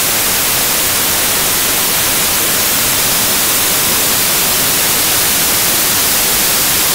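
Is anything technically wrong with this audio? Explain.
Yes. Samples built from the wrong bytes, throughout: misassembled sample bytes turn fast-changing low bits into the main signal, giving loud, harsh broadband noise, close to white on loud sounds.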